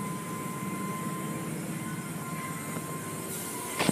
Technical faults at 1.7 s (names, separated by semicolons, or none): none